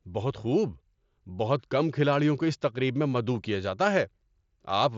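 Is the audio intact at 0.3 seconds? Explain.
Yes, at 0.3 seconds the speech is intact, with no fault at that moment.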